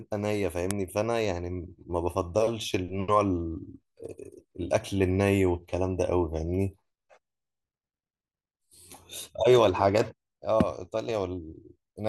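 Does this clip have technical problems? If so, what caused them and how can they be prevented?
Yes. File header played as audio at 0.71 s: a sharp click snaps through the speech where two WAV pieces were joined without stripping the second one's header, so its few dozen bytes of metadata play as samples. Strip headers before concatenating or streaming WAV pieces.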